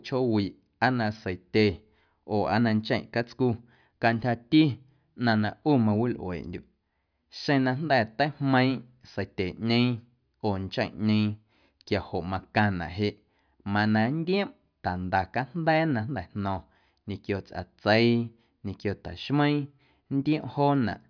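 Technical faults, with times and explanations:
No technical faults can be heard anywhere in this speech recording.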